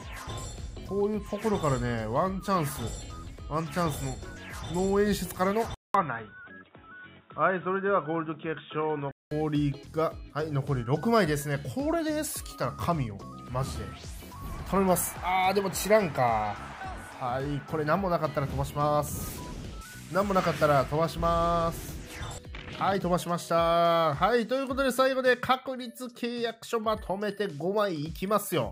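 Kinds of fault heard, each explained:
Input switched to a poorer device: from 5.74 s to 9.31 s the sound turns dull and boxy, with nothing above 3.8 kHz, after a silence of 200 ms at the switch. It clears up again at 9.31 s. The likely cause is a change of capture device, since a new background noise of its own sits well under the signal while the level stays the same. A plain low-pass filter would bring no gap and no new noise floor.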